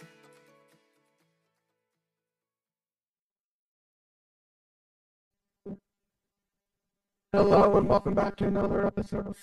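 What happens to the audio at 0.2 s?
Nothing goes wrong at 0.2 s; the audio plays through that moment intact, with no dropout, click or other fault to be heard.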